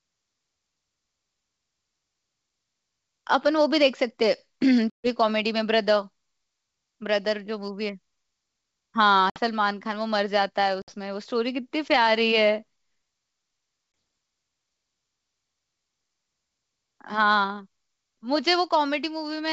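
Packet loss on the ADPCM call cuts the speech four times, at 4.90–5.09 s (140 ms missing, about seven 20 ms packets), 9.30–9.40 s and 10.82–10.94 s (60 ms each, around three packets), and 13.92–13.94 s (20 ms, a single packet). Each gap is filled with silence, leaving the receiving decoder's predictor and step size out of step with the sender's. The sound breaks off into a hard-edged hole, then returns slightly distorted before settling, all over the clear G.722 wideband sound.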